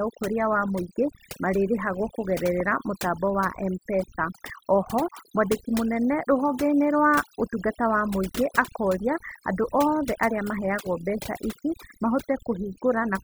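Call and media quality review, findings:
Near-silent background with twinkling specks, throughout. Overdone noise removal: suppressor gating bands near its noise estimate, taking quiet speech detail with them.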